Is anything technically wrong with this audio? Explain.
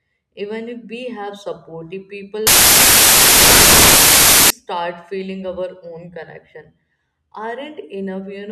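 Yes. From 2.47 to 4.50 s, right after "we have supportive people", the samples are built from the wrong bytes: the byte order or alignment slips, so the jittery low bits land in the high end of each value. That turns the speech into loud, harsh broadband noise, close to white.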